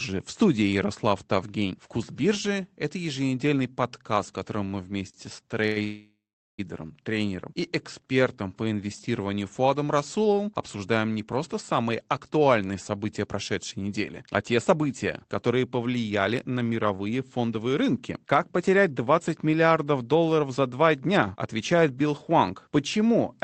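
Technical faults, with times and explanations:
5.09–5.16 s and 5.67–5.78 s, short stall from a late packet: The sound hangs for about 44 ms and then 93 ms. Each time a packet arrived late, the jitter buffer ran dry, and the receiver stretched the last sound until the packet came. Nothing is lost, but the held sound buzzes slightly. On a spectrogram the harmonics smear flat and repeat. The waveform shows a short, periodic stretch.
5.84–6.60 s, call audio freeze: The audio stops for 746 ms, then resumes where it left off with nothing missing. This was likely caused by packets held up in transit, which emptied the jitter buffer. The receiver first extended the last sound as a fading buzz, and the final 390 ms or so is silence. A spectrogram shows a smeared, decaying band, then a blank gap, before normal energy returns. The waveform tapers to a flat line.
11.78–19.28 s and 21.11–21.92 s, jitter buffer speed-up: The buffer had built up more audio than it targets, so the receiver repeatedly cut out pitch-period-sized slices to shrink the delay. 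The first stretch plays at 111% speed and loses roughly 0.7 s over about 7.5 s. The second runs at 109% and drops about 70 ms. Pitch holds steady while the speech sounds hurried. Segments on the spectrogram look compressed in time, and the waveform shows small splice joins between periods.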